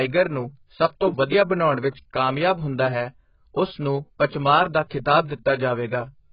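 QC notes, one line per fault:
throughout: AAC compression, likely at a very low rate near 12 kbps. Nothing reaches above 5.1 kHz, and the speech sounds dull and smeared with a warbling, fizzy texture on sibilants. A simple low-pass filter would sound muffled but clean.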